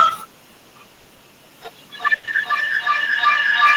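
At 0.95 s the sound stops moving forward for about 100 ms, to 1.07 s. The last sound is held as a fading buzz rather than dropping to silence, and then the audio resumes exactly where it left off. This is a call audio freeze, likely from packets held up in transit until the jitter buffer ran dry. The stream is now running 100 ms late, but nothing is missing. On a spectrogram the frame just before 0.95 s is smeared sideways into flat, slowly dimming horizontal bands with no onsets. The waveform shows a decaying periodic stretch instead of a gap.

From 1.97 s to the end of the clip, feedback echo between two devices takes over. Each stretch of speech comes round again at an interval of roughly 0.4 s, thinner and more ringing on each pass. The repeats build up instead of dying away, peaking about 4 dB above the speech itself. That happens when a second device in the same room replays this microphone's signal, and each device's echo canceller removes only its own playback. 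A spectrogram shows the same harmonic patterns stacked at regular offsets, with narrowing, resonant bands. The waveform envelope grows denser and louder rather than tapering.

Inside that echo, two short stalls from a late packet follow back to back. From 2.16 to 2.25 s a sound is held for an extra 70 ms, and at 2.25 s another 20 ms is added, ending at 2.29 s. Each time a packet arrived after its slot, the receiver stretched the last sound to bridge the wait, then carried on with nothing lost. These stalls put another 90 ms of delay on top of the earlier 100 ms. They are audible as a slightly over-long syllable with a slight buzz or dip. On a spectrogram they appear as briefly frozen harmonics. The waveform shows a short repeated cycle with a small dip at each join.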